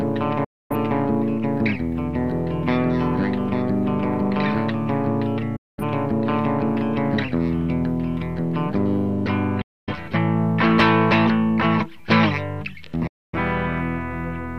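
Four digital broadcast dropouts occur, at 0.44 to 0.75 s, 5.56 to 5.83 s, 9.61 to 9.93 s and 13.07 to 13.38 s. Each time the receiver lost valid frames and muted, fading out over about 8 ms, so the sound drops to silence rather than clicking. The gaps last 256 ms, except 213 ms at 5.56 s, which fits the loss of several whole frames. Whatever was transmitted during each gap is missing when the audio resumes.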